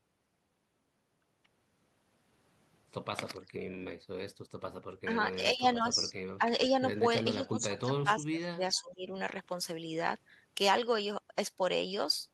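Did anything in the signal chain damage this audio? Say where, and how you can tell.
Yes, the damage comes from the call's echo processing.

Speech suppressed in double talk: the echo canceller was likely unable to separate the local talker from loudspeaker echo while both sides spoke, so it ducked the speech. The speech dips at 3.57–3.62 s (about 30 dB), 5.06–5.10 s, 5.35–6.13 s (patchy, about half a second in total), 6.38–6.42 s, 7.36–8.61 s (about 25 dB, roughly a second affected) and 8.81–9.12 s.

Echo leak: the loudspeaker side's echo canceller likely left some of its microphone pickup in the return signal. A faint delayed copy of the speech appears at 8.76–8.80 s, trailing the original by about 0.46 s and sitting about 35 dB below it. It is a brief scrap just before the suppression at 8.81 s, carried through the Opus call path's normal coding.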